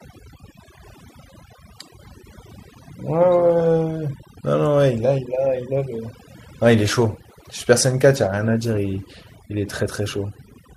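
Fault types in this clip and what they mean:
Overdone noise removal: a noise reducer set far too aggressively mutes any frequency band near its noise estimate, taking soft parts of the speech with it, so throughout the clip the background drops and breaks up into twinkling specks.
Call bitrate drop: the bandwidth estimate fell, forcing the encoder onto far fewer bits, so from 6.65 s to the end the speech turns coarser and muffled, consistent with a fall from 64 to about 22 kbps, at its worst for about 2.6 s.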